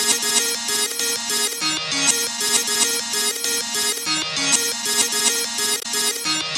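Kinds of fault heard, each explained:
Damaged data in a compressed stream: from about 5.79 to 5.86 s, roughly 70 ms, the decoder hits corrupted frames, loses sync and hunts for the next valid frame header, producing a short glitch. On a spectrogram this appears as a brief vertical disruption that breaks the surrounding pattern, and on the waveform as an abrupt discontinuity that doesn't follow the shape of the sound on either side.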